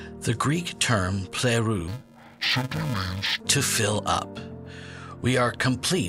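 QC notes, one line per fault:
1.88–3.40 s, interleaved audio read as planar: alternating left/right samples split into halves, so each 2.67 ms block (fitting 128 samples) replays at half speed, sounding dull and robotic with a 375 Hz buzz. Spectrogram shows lost highs and bands at 375 Hz multiples; waveform shows regular 2.67 ms discontinuities.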